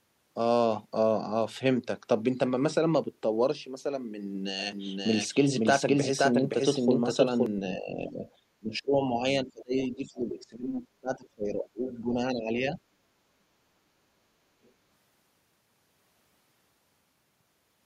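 From 4.72 to 7.46 s the speech is heard twice, a doubled audio track: a second full-band copy trails the first by about half a second at roughly the same loudness. The likely cause is the signal arriving again through a slower path. Unlike room echo or reverb, the copy has no decay or room colour, and it starts and stops abruptly rather than fading.

Speech suppressed in double talk follows at 7.77 to 8.26 s, where the voice dips by around 15 dB for a bit under half a second. It happens again, more severely, from 8.6 to 12.79 s, with drops of around 25 dB adding up to roughly three seconds. The likely cause is an echo canceller that, with both sides talking at once, could not tell its own talker from loudspeaker echo and turned everything down. This differs from a dropout or gain ride because the ducking tracks the other voice's activity, thinning or chopping the talker in pieces.

The other side's voice leaking through appears at 8.26 to 8.31 s, 9.8 to 10.42 s, 11.66 to 11.98 s and 14.64 to 14.71 s. 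It is a faint second voice, about 20 dB below the talker at its strongest near 10 s and far quieter elsewhere. This is likely residual loudspeaker echo the canceller failed to remove. Unlike the doubled track, it is a different voice rather than a copy of the talker.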